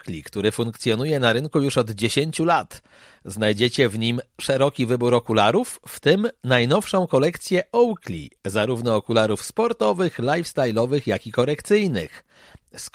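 No technical faults can be heard anywhere in the speech.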